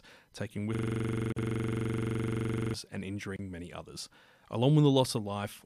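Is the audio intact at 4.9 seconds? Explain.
Yes, the speech at 4.9 seconds is intact, with no fault at that moment.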